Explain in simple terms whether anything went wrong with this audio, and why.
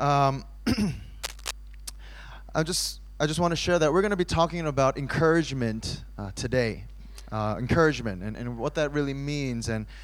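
Most likely a worn cable or connector was moved while recording, so its electrical contact kept changing rapidly. That produces cable scratch noise from 1.23 to 1.51 s: an uneven burst of scratching, rustling noise laid over the sound for about a quarter of a second.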